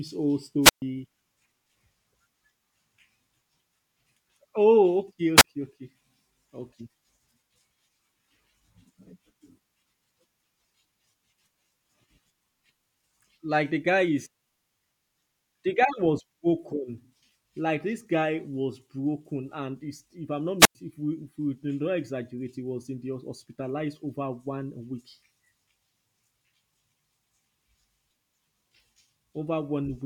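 Wireless microphone squelch dropouts occur at 0.62–0.82 s, 5.36–5.44 s and 20.59–20.75 s. Each time the FM link fades, hiss rises, and the receiver's squelch mutes the speech for about 131 ms, 31 ms and 99 ms respectively before it returns.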